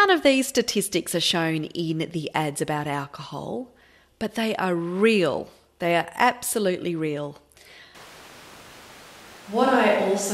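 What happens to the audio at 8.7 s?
At 8.7 s the recording has likely switched to a distant microphone, with the close one dropped, starting at 7.95 s right after "are absolutely real" and lasting to the end. The speech turns roomy, hollow and thinner in the bass, at about the same level, with room noise roughly 25 dB below it.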